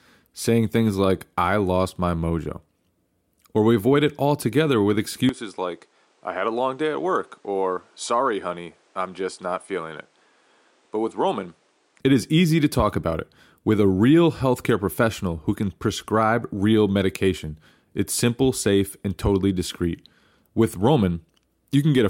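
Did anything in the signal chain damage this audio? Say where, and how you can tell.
Yes. From 5.29 s to 12.00 s the speech turns duller and about 5 dB quieter, with nothing above 10.5 kHz and new background noise roughly 35 dB below it, switching without any gap. The likely cause is the input switched to a poorer device at the driver stage.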